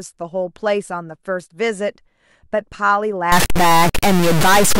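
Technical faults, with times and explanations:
3.32 s to the end, stuck bit: harsh, buzzy distortion with noise in the pauses, likely one high-order bit held fixed, shifting samples by about -10 dBFS.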